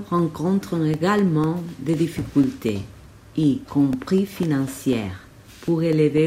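A speech recording carrying periodic USB or driver dropouts: from 0.19 s to 6.18 s, roughly a millisecond of audio drops to silence every 0.25 s, about thirty times, heard as evenly spaced ticks wherever there is signal, consistent with a background task stalling the audio driver.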